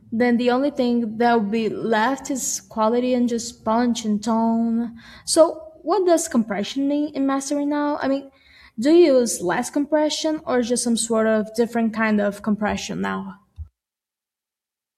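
Nothing stood out as a technical fault on listening to this speech recording.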